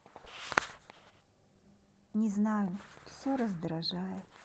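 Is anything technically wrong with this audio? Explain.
No, nothing here is technically wrong; it's speech carried through Opus voice compression at 24 kbps in its hybrid, fullband mode, and that compression is doing its normal job.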